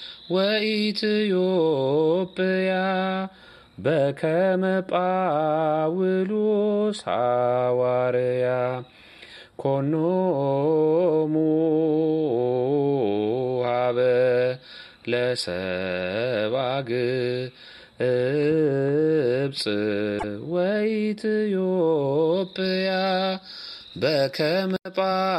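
At 20.18 s, lasting until 20.24 s, a glitch of about 56 ms breaks the sound abruptly. The likely cause is a broken MP3 bit reservoir: frames were lost, and the following frames, each about 26.1 ms long, reached back for borrowed data that was no longer there and decoded from the wrong bytes. The sound jumps forward across the gap. On a spectrogram this is a narrow vertical band out of place with its surroundings, and the waveform shows a discontinuity.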